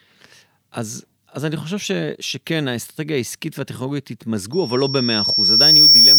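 From 4.52 s, a microphone-loudspeaker loop runs away at 5.5 kHz. This loudspeaker feedback squeal swells over about a second and a half to drown the speech.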